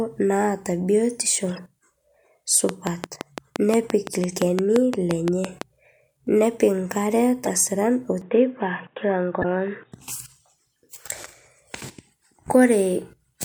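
Right after "naata biotisho", at 1.49 to 1.59 s, there's a corrupt frame decoded: a handful of compressed frames arrived with flipped bits and the decoder played them anyway, so misread gains and codes scatter energy into the wrong frequencies. You hear it as a short glitch lasting about as long as those damaged frames.

From 2.69 to 5.63 s a train of clicks runs over the speech. The clicks are evenly spaced at about 5.8 per second, about twenty of them in all, and they share much the same shape. They sit well above the speech level, so they tick clearly through the pauses as well. A steady pulse like that points to likely interference from nearby equipment or a faulty connection or power supply.

Another corrupt frame decoded turns up at 7.44 to 7.49 s. Only a couple of frames are hit, and it's a noticeably louder glitch than the first.

At 8.22 s the input switched to a poorer device, and it stays that way until 9.92 s. 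There's no gap at the switch and the level barely moves, but nothing gets through above 3.8 kHz, so the speech suddenly goes dull and boxy. There's also a faint new noise floor sitting far below the speech. That sudden band-limiting is likely a change to another microphone or a headset's call profile, and the sound opens up again at 9.92 s.

Inside that stretch, at 9.42 to 9.45 s, a third corrupt frame decoded covers a couple of frames. It's the loudest of the three, a brief glitch of misplaced energy.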